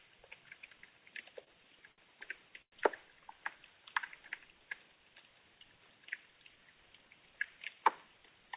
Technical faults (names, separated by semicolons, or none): short stall from a late packet; call audio freeze